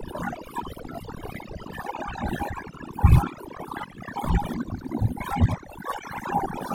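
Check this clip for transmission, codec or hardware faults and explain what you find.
One fault is present, running throughout the speech. It is overdone noise removal. An aggressive denoiser cuts bands near its noise estimate, taking quiet speech detail too. Gaps fill with twinkling specks.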